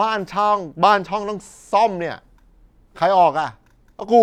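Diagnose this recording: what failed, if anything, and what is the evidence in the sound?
Nothing failed: no stage of the chain leaves any audible mark on this speech recording.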